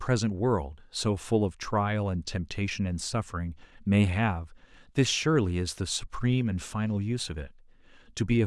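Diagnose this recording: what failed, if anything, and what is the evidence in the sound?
Nothing in the chain has failed; there is no audible evidence of a fault at any stage. Every point of the speech, from the first sound to the last, gives no sign of a problem in wiring, conversion, buffering, processing, transmission, storage or playback.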